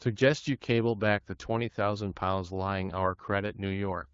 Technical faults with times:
none

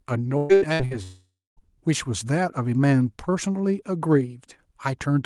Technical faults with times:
0.37-0.94 repeated packet loss (robotic sound)
1.03-1.60 long network dropout

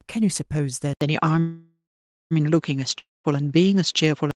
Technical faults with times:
0.93-4.35 input switched to a poorer device
1.39-2.33 call audio freeze
2.99-3.26 long network dropout

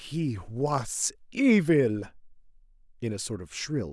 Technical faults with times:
none

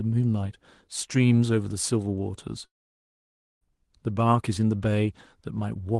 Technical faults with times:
2.65-3.64 long network dropout

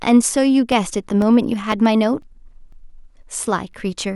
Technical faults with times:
0.22-3.73 periodic USB or driver dropouts

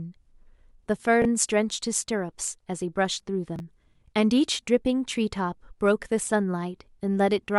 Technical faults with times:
1.22-1.25 chunks out of order
3.56-3.60 chunks out of order

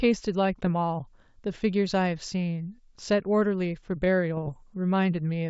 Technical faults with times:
0.64-0.70 bit errors on an ADPCM link
4.37-4.53 bit errors on an ADPCM link

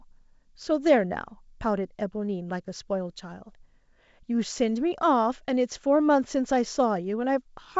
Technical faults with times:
none

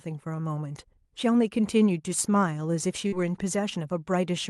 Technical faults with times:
3.08-3.14 short concealed packet loss

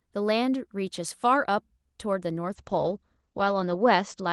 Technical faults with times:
2.57-4.33 call bitrate drop

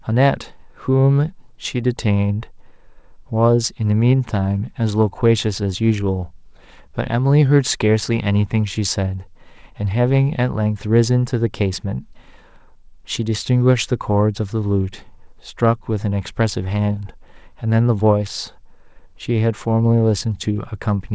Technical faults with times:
none

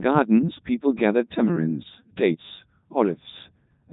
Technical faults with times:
0.00-3.92 Codec 2 vocoder

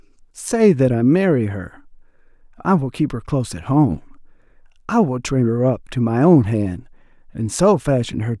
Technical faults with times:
none

